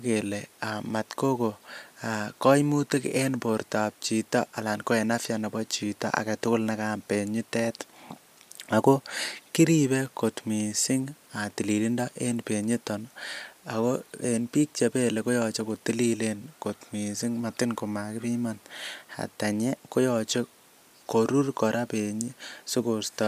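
No technical faults can be heard anywhere in this recording, and the signal holds steady throughout.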